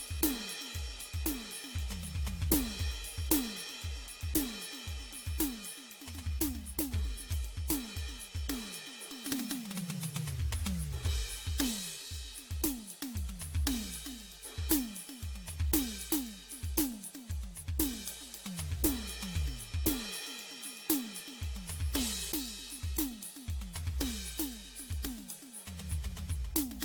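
Generation loss runs throughout the music. It sounds swirly, smeared and hollow, with blurred attacks and nothing above 19.3 kHz. This fits about five AAC passes, likely at 96 kbit/s.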